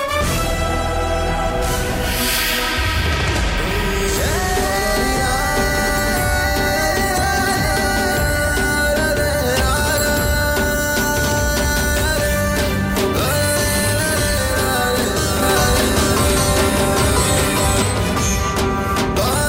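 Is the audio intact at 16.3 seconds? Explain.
No. From 15.42 to 17.82 s there's a doubled audio track: a second full-band copy trails the original by roughly 0.7 s at about the same level, likely from a slower capture path or a misaligned edit, and it cuts in and out abruptly.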